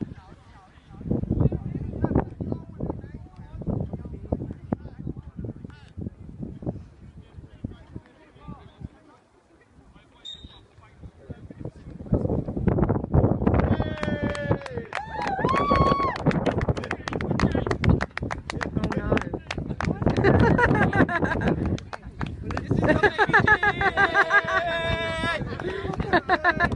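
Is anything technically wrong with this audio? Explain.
No, nothing technically wrong can be heard in this audio. No fault turns up anywhere in the clip that would need explaining.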